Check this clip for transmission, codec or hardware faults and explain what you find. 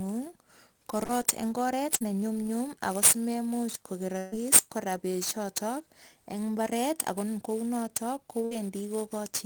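Three kinds of fault are present: sample clock jitter, short concealed packet loss, and bursts of packet loss.

Sample clock jitter runs throughout. An unsteady converter clock, around 10 microseconds rms, mistimes samples. A hiss and roughness follows loud, bright speech.

Short concealed packet loss occurs at 1.05 to 1.11 s and 1.97 to 2.02 s. About 40 ms went missing each time. The decoder extended the previous sound, leaving a brief smear.

Bursts of packet loss occur at 4.18 to 4.35 s, with 140 ms missing, and at 8.45 to 8.53 s, with 60 ms missing. Concealment stretches the last sound into a fading buzz or hiss. Speech then resumes further on.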